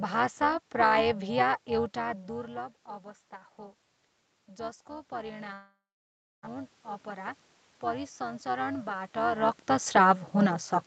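A metallic buzz runs through the whole clip, with the level rising and falling by about 11 dB at roughly 400 times a second. This is overlap-add ripple: the windowed frames were rejoined with an overlap that doesn't sum to constant gain, so every frame carries its own swell.

From 4.47 s to 7.43 s, after the input level falls by about 15 dB, the voice and room noise swell together by about 5 dB over nearly three seconds. This is automatic gain rising, as the gain control slowly pushes up its gain to make up for the quieter input.

From 5.53 s to 6.45 s, in the middle of that swell, the sound turns into a fading buzz or hiss. Near-silence follows for about two-thirds of a second, and the audio resumes with roughly 0.9 s missing. This is likely a long network dropout, with the receiver stretching the last sound it had before giving up.

From 8.17 s to 9.97 s a second, gentler automatic gain rise of about 3 dB brings the voice and background up together. 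It overlaps the talker moving at around 9 s.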